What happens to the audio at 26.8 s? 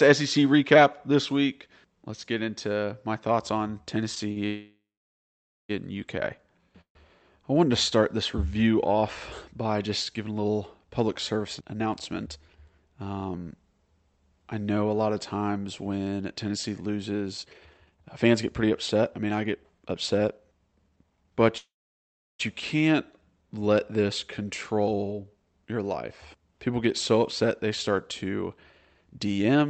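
Nothing goes wrong at 26.8 s: the speech passes through intact, with no dropout, click or distortion at that moment.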